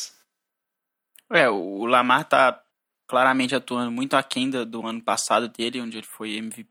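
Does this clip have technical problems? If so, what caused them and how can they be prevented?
No, nothing technical goes wrong anywhere in this speech recording, so there's nothing here that needs preventing.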